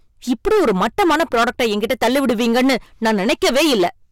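Hard clipping runs throughout: the speech is driven about 18 dB past the ceiling, roughly a sixth of samples flattened, giving harsh fuzz on every loud sound.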